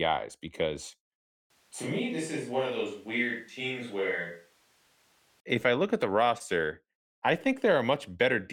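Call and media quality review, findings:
Speech goes roomy and hollow from 1.50 to 5.40 s, right before "if I look at", thinner low end, about 5 dB quieter, faint room noise coming up, then snaps back close. Switch to a distant microphone, likely close mic dropping out and a far pickup covering.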